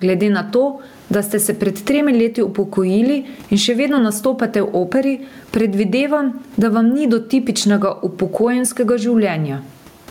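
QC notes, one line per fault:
throughout: gain pumping; the gain swings by around 15 dB, with the room noise about 45 dB below the speech, likely a fast limiter fighting far-too-high gain. Waveform peaks look flattened.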